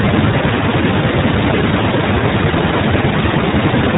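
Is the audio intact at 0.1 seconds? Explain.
No. At 0.1 s the speech is already passing through the iLBC codec, which affects the whole clip. Everything above 4 kHz is gone, and each short frame's excitation is coded independently. The result is a plainly rough, synthetic narrowband sound that fits the 15.2 kbps, 20 ms frame mode.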